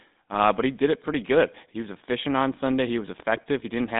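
A speech recording that's been through the GSM full-rate codec the whole way. It has that buzzy, gravelly roughness, and the band runs only from about 200 Hz to 3.7 kHz, which fits the old 13 kbps full-rate coder. There are also two bursts of GSM bit errors, at 0.32 to 0.41 s just before "but he did it" and at 3.36 to 3.47 s. Corrupted frame values make the sound squawk and gargle there, and the second burst is the worse of the two.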